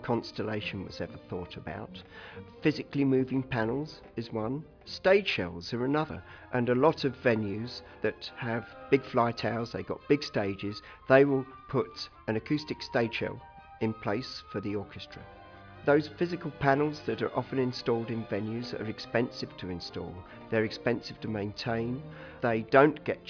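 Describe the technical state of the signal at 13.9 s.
At 13.9 s the signal is intact, with no dropout, distortion, glitch or other technical fault present at that moment.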